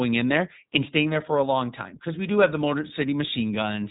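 Throughout the speech, the iLBC codec is plainly audible. Nothing passes above about 3.8 kHz, so the sound is narrow and muffled. Each short frame is coded on its own, which fits 20 ms frames at 15.2 kbps. The result sounds rough and slightly synthetic.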